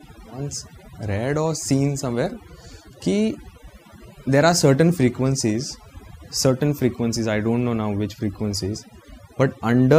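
From start to end the speech carries overdone noise removal: an over-aggressive reducer shuts off individual frequency bands sitting near its noise estimate, taking quiet speech detail along. Pauses fall to near silence with twinkling specks, unlike a gate, which mutes everything together.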